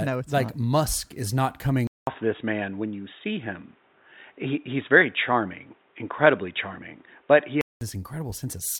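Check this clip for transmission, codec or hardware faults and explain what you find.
One fault stands out. From 1.87 to 7.81 s, after "is not coming", a 200 ms gap precedes dull, boxy sound cut off above 3.8 kHz, with a faint new hiss and a level shift of a few decibels. That points to the input likely switching to a poorer device. The changed noise and level set it apart from a simple bandwidth drop.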